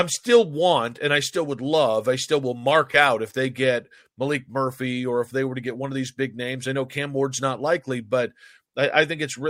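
No technical faults are audible.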